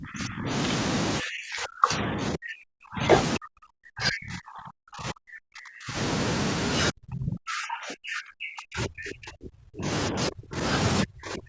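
With both sides talking at once, the echo canceller likely could not separate the talker from loudspeaker echo and turned everything down. The result is speech suppressed in double talk: the speech dips by roughly 25 to 40 dB or cuts out from 0 to 0.49 s, 1.2 to 3.03 s, 3.38 to 5.97 s, 6.91 to 9.87 s, 10.1 to 10.61 s, and 11.04 s to the end. At 8.11 to 8.15 s, the canceller probably missed some loudspeaker signal, so a brief scrap of the other side's voice leaks through, roughly 15 dB below the speech.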